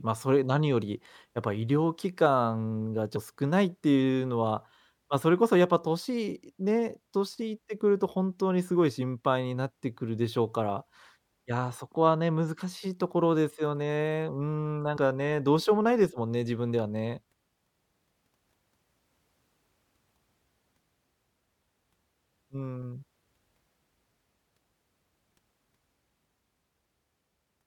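Whole compressed frames of about 26.1 ms each are missing from this speech at 3.15, 7.41, 14.96 and 17.88 s, so the audio jumps ahead. The longest skip, at 3.15 s, loses roughly 150 ms, which points to about five frames.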